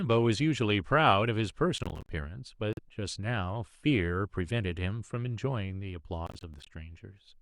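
From 1.78 to 2.09 s the speech breaks into a gritty crackle, the sound of processor overload crackle. The processor repeatedly failed to deliver its audio buffers on time, and each missed buffer was output as silence, leaving a short hard-edged hole. The holes recur at a spacing that points to buffers of around 10 ms, and roughly fifteen of them pile up into a torn, crackling texture. The crackle stops as the load eases.

At 2.73 to 2.79 s the audio cuts out completely for about 43 ms, and then resumes further along, as though it had kept playing through the gap. This is most likely a Bluetooth dropout, in which packets failed to reach the headphones in time and were discarded, so nothing was output until valid data arrived again.

From 6.27 to 6.67 s the processor overload crackle returns and lasts longer. Again the missed buffers are replaced by silence at a roughly 10 ms spacing, about twenty in a row. 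The result is a longer stretch of tearing over the speech, which again stops once the overload passes.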